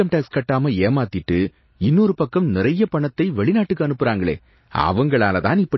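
From start to finish the speech has nothing above about 5.8 kHz, so s sounds come across dull, and there's a watery, swirly quality with smeared consonant attacks. That's most likely MP3 compression pushed hard. Starved of bits, the encoder chops the treble at a fixed point and drops weak frequency lines that flicker in and out between frames. The damage is plainly audible and points to a very low bitrate, something like 24 kbps.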